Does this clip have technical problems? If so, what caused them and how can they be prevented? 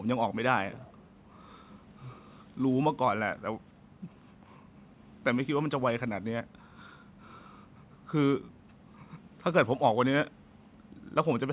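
Yes. From 0.72 to 0.99 s a faint, delayed copy of the speech appears about 306 ms behind it, well below the main level. This is likely an echo leak: a loudspeaker-fed microphone whose echo canceller let residual signal return. Prevent it with headsets or better-converged echo cancellation.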